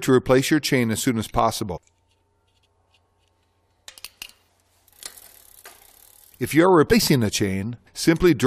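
Three brief disruptions cut into the sound, at 1.75 to 1.78 s, at 4.47 s and at 6.91 s, each heard as a momentary break that can come across as a chirp, squawk, click or short hole. All three are damaged data in a compressed stream: bytes in the encoded file were lost or corrupted, so the decoder misread or rejected the affected frames, lost sync and had to hunt for the next valid frame header before playback recovered.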